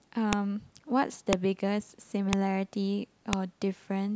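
A speech recording with a file header played as audio: sharp clicks at 0.33, 1.33, 2.33 and 3.33 s, exactly one second apart regardless of the speech, unlike clipping distortion, which follows the loud peaks of the signal.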